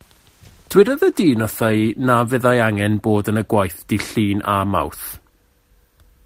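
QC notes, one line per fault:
0.31–2.56 s: call bitrate drop. The speech turns rougher and watery, with the top end dulled, for about 1.4 s at its worst before clearing. That points to the encoder falling from about 32 kbps to 18 kbps, coding more coarsely and trimming high frequencies.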